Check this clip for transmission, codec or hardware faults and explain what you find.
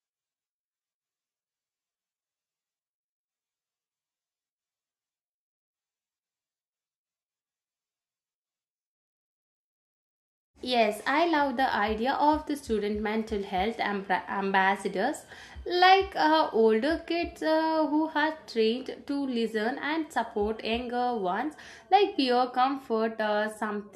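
No faults detected.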